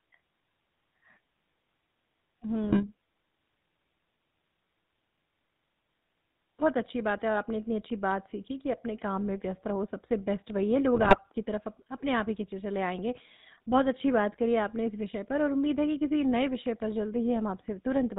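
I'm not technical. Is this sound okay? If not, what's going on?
No. Throughout the recording the speech has a buzzy, gravelly roughness, as if heard through an old mobile phone, and it sounds dull because the higher frequencies are missing. This comes from the GSM full-rate codec, the original mobile-phone speech format. Instead of storing the sound itself, it stores a rough model of the voice and rebuilds it from a simplified pulse pattern, and it drops everything above 4 kHz.

Twice the voice breaks up into squawks, pops and a gargling noise: from 2.64 to 2.84 s, and again from 10.95 to 11.19 s. These are GSM bit errors. On a weak phone connection some of the transmitted data gets corrupted. The receiver then rebuilds those moments of sound from wrong instructions about tone, pitch and loudness, and out comes a short burst of garbled noise.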